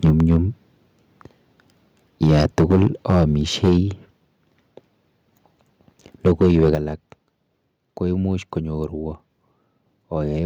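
From 0.04 to 0.37 s the speech breaks up with a harsh, crackling edge. This is microphone overload. Peaks run about 6 dB past the converter's limit and their tops are flattened. The likely cause is an input gain set too high for the converter. At 0.1 s the level drops by about 3 dB in one step. This is the microphone volume stepped down, likely by call software reacting to the clipping. The voice and background fall together.

The overload returns from 2.22 to 3.24 s, about 8 dB over. A short burst from 3.63 to 3.77 s is also about 8 dB over and clips a large share of its samples. At 3.7 s the level steps down again by about 3 dB. From 6.26 to 6.75 s the sound clips again, about 5 dB over. Right at 6.75 s the largest drop follows, about 7 dB, and the whole sound turns suddenly quieter.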